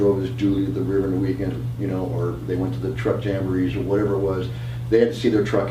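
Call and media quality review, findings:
No faults found here; nothing in this one calls for a ticket.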